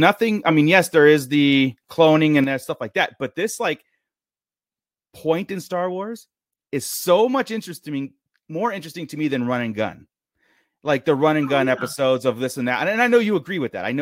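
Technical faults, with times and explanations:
2.44 s to end: sudden gain jump. Right after "is the cloning and", the level drops by about 7 dB in a single step with no fade, and stays down for the rest of the clip. The speech and the background noise fall together by the same amount, so the noise floor does not change relative to the speech. This points to a digital gain change; the likely cause is a setting or bit shift applied instantly rather than ramped.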